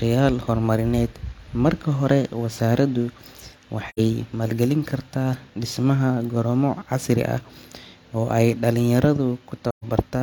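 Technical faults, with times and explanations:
3.89 to 4.00 s and 9.70 to 9.84 s, AAC frame loss with muting: the speech fades into brief soft-edged silences, lasting about 0.1 s and 0.14 s. The gaps fit roughly two and three lost frames whose spectrum the decoder zeroed, with overlapping windows smoothing the edges.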